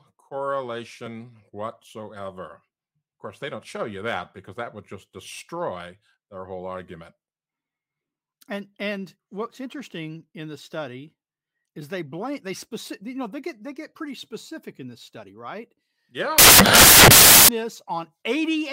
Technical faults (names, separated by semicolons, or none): samples built from the wrong bytes